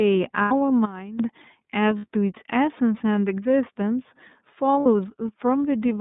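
Throughout, the speech sounds slightly rough and synthetic, and it is confined to a band from about 150 Hz to 3.7 kHz with nothing above. This is the iLBC codec: a narrowband VoIP coder that encodes each frame's excitation independently. Its damage is plainly audible, and the sound fits its 30 ms frame mode at roughly 13.3 kbps.

From 0.42 to 0.52 s the voice turns into a held, faintly buzzy vowel for about 90 ms, then snaps back to normal. These are lost iLBC frames, consistent with three missing 30 ms frames. The decoder filled the gap by repeating the last pitch cycle blended with noise.

At 0.85 s the speech and its background drop together by about 14 dB, with no fade, and they stay lower until 1.2 s. This is a sudden gain jump, likely a digital gain change applied instantly instead of ramped.

The same held, buzzy concealment returns from 1.99 to 2.06 s and again from 4.80 to 4.86 s, each time for about 60 ms, which matches two lost frames per gap. 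Recovery is immediate both times because each iLBC frame decodes on its own.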